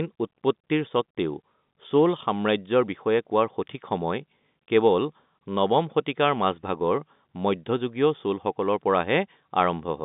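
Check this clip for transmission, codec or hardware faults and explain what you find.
No faults found.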